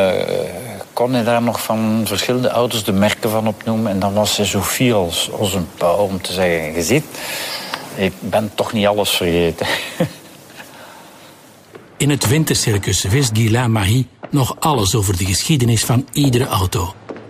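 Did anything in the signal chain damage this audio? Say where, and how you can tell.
No, nothing in the chain from capture through to playback has audibly damaged this audio.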